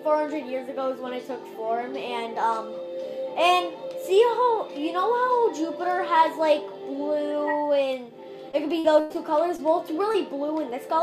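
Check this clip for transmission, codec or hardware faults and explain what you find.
Two kinds of transmission fault appear, both late in the clip.

Repeated packet loss (robotic sound), 8.51 to 9.17 s: packets went missing four times in quick succession, about 180 ms in total, the longest gap 97 ms. The receiver bridged each hole by extending the preceding sound, so roughly a quarter of this stretch is synthetic and the audio turns choppy, with pieces missing.

Short concealed packet loss, 9.57 to 9.60 s and 10.12 to 10.16 s: each time about 20 ms of data arrived too late or not at all. The decoder filled the hole by continuing what came just before and then blended back into the real signal, leaving a brief smear or wobble at each point.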